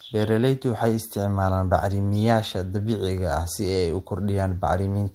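Nothing in the speech stood out as a technical fault on listening.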